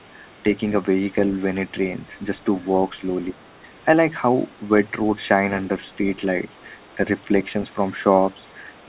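Speech over a narrowband call path, with nothing above 4 kHz, as G.711 would give, carries other side's voice leaking through at 0.19–0.35, 3.23–3.78, 6.56–6.95, 8.40–8.53 and 8.71–8.85 s. This is likely a loudspeaker echo the canceller left behind. The second voice sits very faint, some 30 to 40 dB under the talker. On a spectrogram it shows as weak, unrelated harmonic streaks beneath or between the main speech bands. In the waveform it is a low ripple in the gaps. Inside the longest leak, speech suppressed in double talk trims the talker from 3.33 to 3.37 s. With both sides active, the canceller likely turned everything down, about 10 dB at the deepest, for roughly 40 ms. That looks like a brief notch in the waveform envelope and a momentary fading of the upper harmonics on the spectrogram.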